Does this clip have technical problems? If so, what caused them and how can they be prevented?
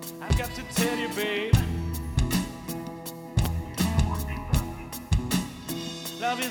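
Yes. There are two loud pops, at 0.30 to 0.33 s and at 3.45 to 3.48 s, each a sharp thump well above the surrounding level while the sound continues underneath. They are likely voltage pulses from a plug, switch, static discharge or driver glitch. The waveform shows an abrupt spike, and the spectrogram shows a thin vertical stripe spanning all frequencies. Securing connections and muting outputs before switching prevents this.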